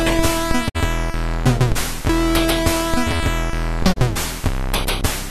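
A digital broadcast dropout at 0.68 to 0.77 s, then again at 3.92 to 3.98 s: the receiver muted when frames went missing, fading out over 20 ms. About 48 ms of sound vanishes first, then 24 ms, which fits two lost frames, then one.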